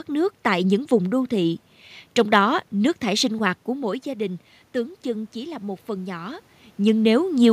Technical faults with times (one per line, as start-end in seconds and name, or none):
3.66-6.50 automatic gain rising